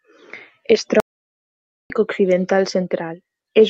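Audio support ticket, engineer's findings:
Clock drift between sender and receiver, throughout. Sender clock runs roughly 2% slow against the receiver, so the jitter buffer keeps draining. Faint, unevenly spaced timing hiccups across the whole clip. Receiver stretching audio to hold sync.

Repeated timing corrections, 0.62–3.38 s. Playback runs at about 97% speed, with around 70 ms of material repeated in total. Small, uneven, same-direction edits. Heard, if at all, as slight hiccups or an unsteady tempo through the stretch.

Playback stall, 1.0–1.9 s. Output drops to silence mid-flow for 900 ms, then resumes. Likely the jitter buffer running empty under the slow sender. Opus call path adds coding noise and band-limits near 8 kHz.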